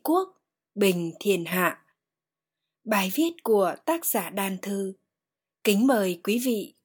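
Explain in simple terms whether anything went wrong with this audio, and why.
A sudden gain jump occurs at 1.52 s: the speech and its background noise both become noticeably louder at once, then drop back at 1.92 s. The level switches instantly rather than fading, likely because a volume setting was applied without a smooth ramp.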